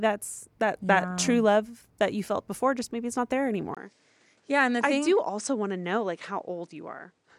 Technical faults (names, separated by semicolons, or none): input switched to a poorer device